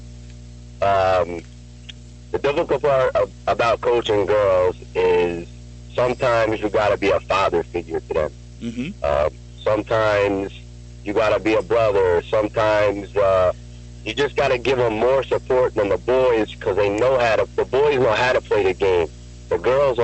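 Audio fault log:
Throughout: mains hum. A steady low tone sits at 60 Hz, with some low harmonics above it, and stays at roughly 20 dB below the signal for the whole clip. This points to a ground loop or a nearby transformer feeding the power-line frequency into the signal. The call codec's top-end limit near 8 kHz leaves that low tone untouched, so the hum comes through at full strength.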